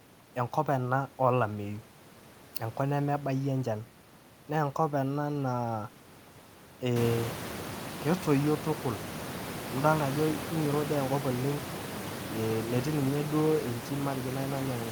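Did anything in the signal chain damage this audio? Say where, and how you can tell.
No, nothing in the chain has harmed this speech; the one change you'll notice is the room's own background noise rising by about 17 dB somewhere around the 7-second mark and then sitting about 9 dB under the speech, which belongs to the room rather than the equipment.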